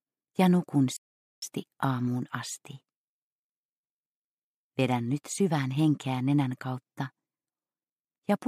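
There's a playback stall early on: the audio cuts out at about 0.97 s and stays silent until roughly 1.42 s, a gap of around 0.45 s, before the sound picks back up. That kind of mid-flow dropout is most likely the player starving for data or its thread getting blocked, so nothing reaches the output until it catches up. Worth keeping in mind if you're checking whether anything was skipped across that gap.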